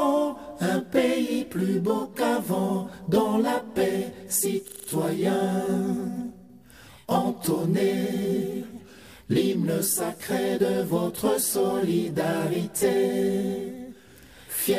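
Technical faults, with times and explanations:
4.68 to 4.88 s, system hang loop: A single 40 ms slice of sound repeats exactly five times, giving a rapid 25 Hz stutter. The system stalled while the audio hardware kept replaying the same ring buffer. Little or no audio appears lost once playback resumes.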